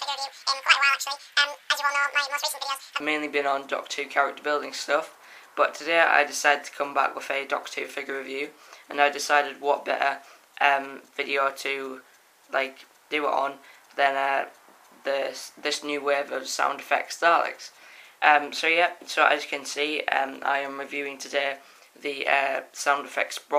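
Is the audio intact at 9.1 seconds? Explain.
Yes, at 9.1 seconds the audio is intact, with no dropout, click, distortion or other fault at that point.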